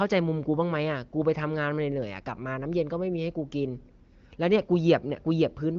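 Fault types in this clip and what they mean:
Nothing stood out on listening to this speech.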